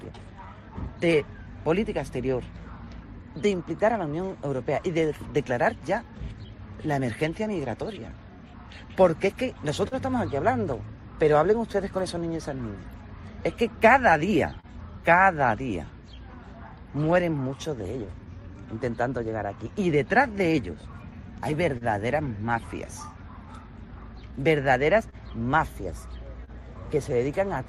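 The sender's clock runs roughly 2% slower than the receiver's, so this clock drift between sender and receiver starves the jitter buffer and small timing hiccups recur throughout. From 0.15 to 24.33 s, repeated timing corrections stretch pieces of audio to compensate, adding about 0.4 s in total at about 98% speed. At 9.88 to 9.95 s, a short stall from a late packet empties the buffer, so the receiver holds the last sound for 39 ms. Between 11.73 and 14.66 s, scattered short gaps from about four late or lost packets are patched by continuing the sound, each 40 ms or less, giving ticks and smears. At 21.78 to 21.84 s, another late packet causes a short stall, and the sound is held for 34 ms. From 24.18 to 26.50 s, about three more scattered short gaps, each up to 30 ms, are filled in the same way.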